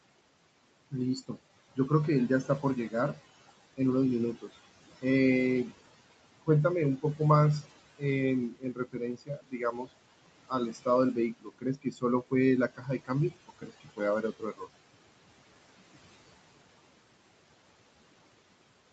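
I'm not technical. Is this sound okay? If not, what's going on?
No. There are noise suppressor artifacts all the way through. A noise filter keeps turning the background noise down and up. It sinks in the pauses and comes back under the talking.

There is also speech cut by the noise suppressor. The filter mistook bits of the talking for noise and turned them down. Quiet sounds and word endings get swallowed from 0.91 to 1.9 s, 2.44 to 3.79 s, 6.46 to 9.91 s and 10.48 to 14.67 s. The last two stretches lose the most.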